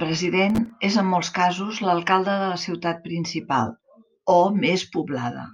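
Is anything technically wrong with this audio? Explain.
Yes. From 0.50 to 0.70 s the speech carries a burst of processor overload crackle. The processor repeatedly missed its deadlines for short buffers of roughly 3 ms, and each late buffer was replaced by a hard-edged silent gap. The run of gaps produces a gritty tearing sound that stops once the load clears.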